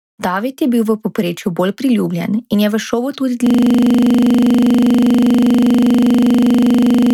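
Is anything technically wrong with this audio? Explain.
Yes. From 3.47 s to the end, there is a system hang loop: the system froze while the sound hardware kept replaying the same ring buffer. A 40 ms slice repeats 92 times, so the speech turns into a rapid, machine-like buzz at 25 Hz.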